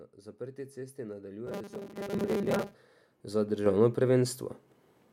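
Right after "zaprti cesti", from 1.47 to 2.75 s, the speech turns into a stiff, metallic buzz pitched at 200 Hz that only loosely tracks the words. That's robotic sound from repeated short buffers, likely from roughly half the audio being replaced by repeats of a 5 ms slice.

Then the microphone volume gets stepped up twice. At 2.13 s the level jumps by about 9 dB, and at 3.66 s by about 6 dB more. The voice and the background rise together each time, because the input gain itself was raised.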